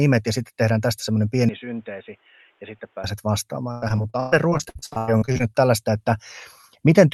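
Input switched to a poorer device, from 1.49 to 3.04 s: the speech likely moves onto a weaker microphone or headset path with no gap at the change. Everything above 3.8 kHz vanishes, the level falls by about 10 dB, and a new noise floor appears, making the voice dull and boxy.

Repeated packet loss (robotic sound), from 3.71 to 5.41 s: the stream keeps dropping out, and each hole, the longest 119 ms, is patched by stretching the last sound. With nearly half of the stretch filled in this way, the speech turns choppy, with pieces missing.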